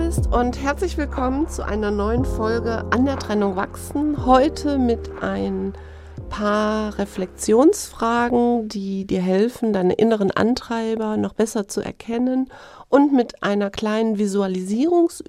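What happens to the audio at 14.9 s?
Just before 14.9 s, from 14.74 to 14.90 s, DAB burbling breaks in: weak reception lets a small fraction of corrupted bits past error correction, so individual MP2 sub-bands take on wrong samples. The result is short noise blips in single sub-bands, rather than the gaps or repeats of a dropout.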